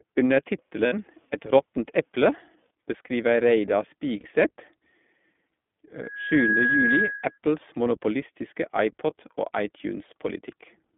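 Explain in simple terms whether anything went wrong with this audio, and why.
Yes, three things went wrong.

The iLBC codec affects the whole clip. The speech went through a phone-style coder that keeps only roughly 200 Hz to 3.5 kHz, so it sounds narrow and muffled, with a plainly audible rough, slightly synthetic edge from the heavy compression.

Lost iLBC frames occur at 0.86 to 0.94 s and at 4.20 to 4.26 s. About 60 ms and then 40 ms of the signal went missing in transit. Each time, the decoder filled the gap by repeating the last sliver of voice, giving a short buzzy, held sound before snapping back to normal.

A loudspeaker feedback squeal runs from 6.03 to 7.38 s. The microphone picked up its own loudspeaker, and a tone near 1.7 kHz kept getting re-amplified around that loop. It swells over about half a second into a whistle on top of the speech.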